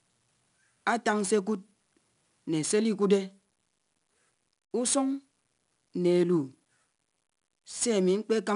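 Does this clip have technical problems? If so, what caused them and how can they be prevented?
Yes. 4-bit ADPCM compression runs throughout. Its coarse steps add gritty hiss that follows the speech level, and nothing remains above 10.6 kHz. Keeping the audio as uncompressed PCM or a modern codec prevents this.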